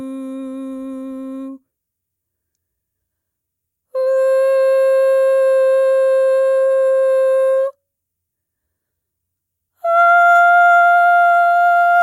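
Nothing goes wrong anywhere in this bit of music, so there's no fault to point to at any moment.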